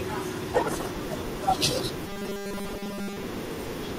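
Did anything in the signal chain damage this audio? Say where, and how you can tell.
Yes. Robotic sound from repeated short buffers appears from 2.07 to 3.23 s: the speech becomes a rigid, metallic 200 Hz buzz. The driver or buffer stage likely starved and kept repeating a 5 ms slice, replacing most of the real audio.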